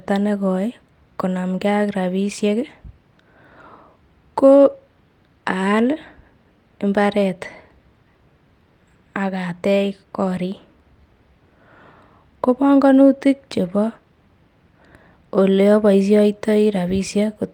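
Listening to the speech recording, nothing stood out as a technical problem at any point.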